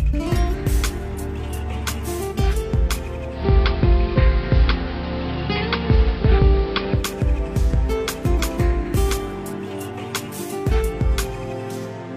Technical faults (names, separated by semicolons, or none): digital radio blending to analogue